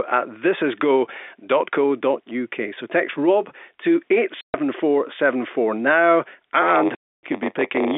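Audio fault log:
4.41–4.54 s and 6.95–7.23 s, packet loss filled with silence: runs of packets went missing and the receiver inserted silence, opening 130 ms and 280 ms holes with hard edges, consistent with 10 ms packets.
6.61 s to the end, block size mismatch (padded): a stage writes blocks shorter than the 512-sample read, so the zero-padded remainders buzz at 93.8 Hz and the sound runs at 0.938 speed with unchanged timbre.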